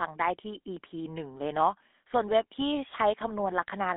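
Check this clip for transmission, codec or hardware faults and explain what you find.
The whole clip has been through the GSM full-rate codec. It runs throughout the speech and its damage is plainly audible. The codec models the vocal tract as a filter and excites it with a regular pulse train that keeps only every third excitation sample. That leaves a buzzy, gravelly roughness on the voice. The sound fits a 13 kbps coding rate, carried on a line band of 250 Hz to 3.6 kHz. On a spectrogram, energy stops sharply near 3.6 kHz and is thin below 250 Hz, with coarse, smeared harmonics in between.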